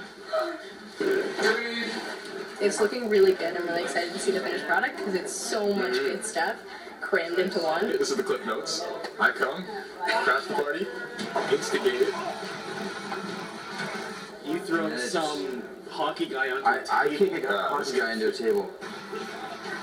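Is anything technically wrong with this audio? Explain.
Yes. Throughout the clip there is a block size mismatch (padded). Each block arrives slightly short, and zeros fill the remainder, leaving a tiny gap every block. This produces a steady 43.1 Hz buzz, which fits a 1024-sample read. The audio runs at 0.999 times speed. The strictly regular buzz distinguishes it from random dropouts.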